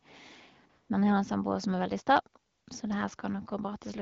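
A short speech recording carried over a mobile call shows AMR comfort noise in two pauses, from 0.69 to 0.89 s and from 2.51 to 2.67 s. In each gap, the real background drops out and a smooth, steady synthetic hiss switches in for 200 ms and 160 ms. The sending phone judged the talker silent and stopped transmitting speech frames, so the receiver generated noise from a coarse level and spectrum description. The wideband voice path itself carries only light coloration, which fits AMR-WB at around 12.65 kbit/s.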